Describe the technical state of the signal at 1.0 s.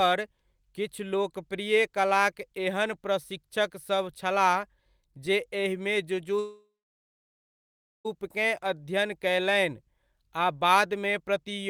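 The signal at 1.0 s is intact, with no technical fault present at that point.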